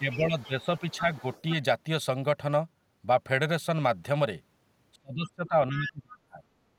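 Speech suppressed in double talk runs from 0.0 to 1.05 s. The dips add up to around two-thirds of a second and reach roughly 10 dB. The likely cause is that the echo canceller met far-end sound arriving while the talker spoke, could not tell the two apart, and pulled the level down on both.

Inside that stretch, the other side's voice leaks through at 0.11 to 0.18 s, roughly 15 dB below the speech. It comes through again, much lower at about 30 dB down, from 0.39 to 0.98 s and from 1.14 to 1.42 s. This is likely the canceller leaving part of the loudspeaker playback in the microphone signal.

Speech suppressed in double talk returns from 4.96 to 5.54 s and from 5.70 to 6.43 s, with dips reaching roughly 30 dB. Within the second stretch, leakage of the other side's voice surfaces briefly at 5.86 to 5.92 s, about 10 dB under the speech.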